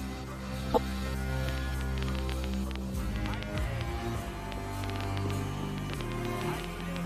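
A compressed frame with flipped bits was decoded anyway at 0.70 to 0.78 s, a corrupt frame decoded across what sounds like about three frames, so a brief squeaky burst reaching about -10 dBFS cuts through the sound. From 1.49 to 6.97 s, likely interference or a struggling interface injects a train of clicks, about 7 per second at an uneven pace, some 40 in all, popping out roughly 15 dB above the sound.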